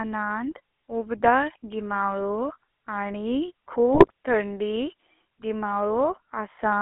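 Speech runs through a GSM full-rate codec for the whole clip. The voice sounds buzzy and gravelly. The band is cut to about 300 Hz to 3.4 kHz, and the coarse pulse excitation fits a 13 kbps GSM full-rate stream. GSM bit errors break out from 3.94 to 4.11 s, just after "उबदार गीमाळो आणी". The voice squawks and gargles there. Corrupted filter, pitch and gain values are reaching the decoder, which points to several damaged frames on a weak radio link.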